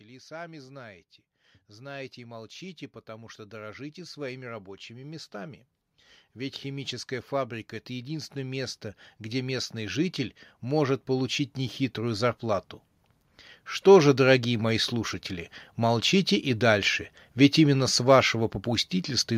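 In this speech clip, voice and background swell together from 1.73 to 5.65 s, just after "и сами знаете", by about 8 dB, and again from 6.33 to 12.71 s by about 11 dB. This is automatic gain rising: the gain control judged the input too quiet and slowly raised its level.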